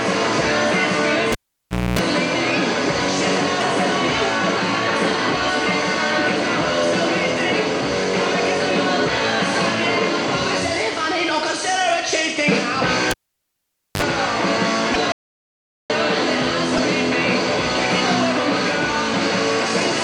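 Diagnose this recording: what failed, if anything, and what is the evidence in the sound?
Analogue wiring failed twice with a cable pulled and plugged in. From 1.32 to 1.99 s, a pop opens about 0.62 s of near silence, then 0.26 s of 60 Hz buzz as only the tip touches, then a second pop. From 13.11 to 14.02 s, the gap runs about 0.86 s with a brief 0.05 s burst of 50 Hz buzz. On a spectrogram each pop is a full-height vertical line, and the buzz shows as a stack of mains harmonics. On a waveform the gaps look nearly flat.

At 3.59, 14.93 and 16.76 s, the audio jumps ahead, and each jump leaves roughly 30 ms of chirp, noise burst or hole. That is about one 26.1 ms frame, which points to a broken MP3 bit reservoir as the likely cause: after frames were lost, the following frame read reservoir bytes belonging to another frame. A spectrogram shows a thin smeared column at each point.

From 15.12 to 15.90 s, the sound stops abruptly mid-flow for about 0.78 s and returns just as abruptly. 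The waveform is a flat line of silence, and the spectrogram is black with no room tone. This fits an audio dropout to silence, where the input was likely lost while the recorder kept writing silence.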